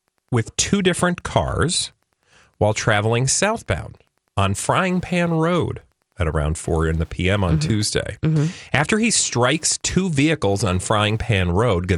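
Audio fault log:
throughout, Wi-Fi interference: A steady ticking runs under the speech about ten times a second. The spacing is 102.4 ms, the interval at which a nearby Wi-Fi radio transmits its beacon. Each transmission is picked up by the audio circuitry and rectified into a short audible click. The clicks sit about 40 dB below the speech, so they show most in pauses and low passages.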